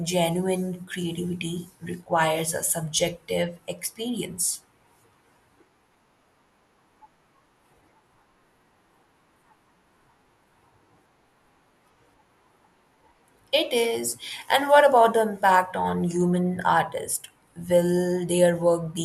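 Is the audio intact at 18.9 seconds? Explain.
Yes, at 18.9 seconds the speech plays through cleanly, with no dropout, click or distortion to be heard at that moment.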